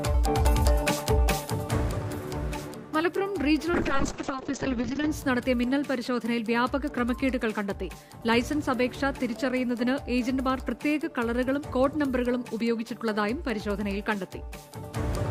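From 3.77 to 5.17 s there's a call bitrate drop. The bandwidth estimate collapsed, so the encoder starved, sounding like a fall from around 96 kbps to roughly 6 kbps. The top end is lopped above 8 kHz, leaving the sound muffled and watery for about 1.3 s before clearing.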